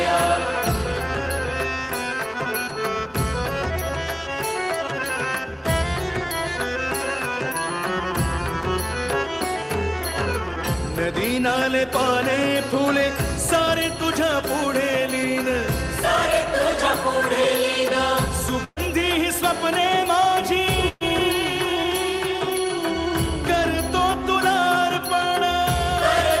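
A burst of packet loss struck the stream twice, at 18.64 to 18.79 s and again at 20.88 to 21.04 s, with about 120 ms of audio lost each time. The receiver bridged each gap by extending the last sound and fading it, so a stretched buzz or hiss stands in for the missing material, followed by a brief silence (20 ms, then 10 ms) before the audio resumes further along.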